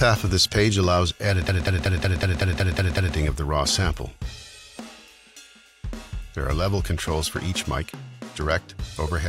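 The audio has a system hang loop from 1.49 to 3.16 s: one 186 ms piece, consistent with an 8192-sample buffer, repeats 9 times at 5.38 Hz as playback keeps cycling a frozen buffer. On a waveform and spectrogram, identical blocks tile side by side with seams every 186 ms.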